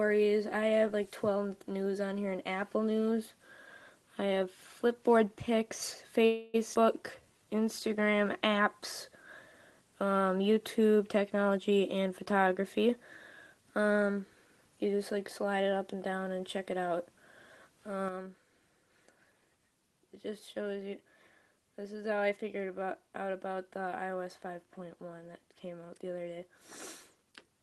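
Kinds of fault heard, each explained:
call audio freeze: At 6.25 s the sound stalls and the last moment is held as a fading buzz or hiss until about 6.56 s, then resumes exactly where it stopped. The likely cause is packets delayed in transit, so the jitter buffer ran empty and the receiver stretched out its final audio. About 0.28 s of filler was inserted, nothing was lost, and everything after it now plays that much later.
skip ahead: At 6.74 s the playback jumps forward, with two parts of the sound joined almost directly and only a tiny bridge between them. Roughly a tenth of a second of audio is simply gone. Here a stretch was dropped while newer audio was already waiting, which also gives back some of the delay the freeze just before had added.
jitter buffer slow-down: From 7.22 to 8.17 s the sound drags, running at about 89% speed with the pitch unchanged. Sounds are drawn out. The jitter buffer was running low or had just raised its target delay, so the receiver repeated single pitch periods and scraps of pauses over and over to rebuild its reserve, adding 112 ms in total across that stretch.
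jitter buffer speed-up: Between 11.34 and 12.94 s the sound hurries, playing at about 118% speed while the pitch holds steady. It feels rushed and slightly compressed in time. The buffer had collected more audio than it wanted, so the receiver repeatedly cut out short pieces of one or a few pitch periods, trimming roughly 0.3 s to pull the delay back down.
sudden gain jump: At 18.09 s the level drops abruptly by about 7 dB and stays there to the end. Sound and background noise fall together, with no fade between the two levels. This likely comes from a digital gain setting changing from one sample to the next with no ramp. The Opus-coded call path carries the quieter audio through the same band-limited sound as before.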